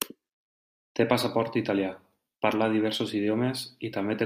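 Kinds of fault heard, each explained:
There is no kind of fault to be heard in the clip.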